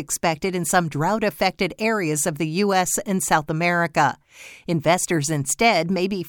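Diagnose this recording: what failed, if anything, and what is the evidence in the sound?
Nothing in the audio points to a failure at any stage, from wiring and conversion through transport, storage and playback.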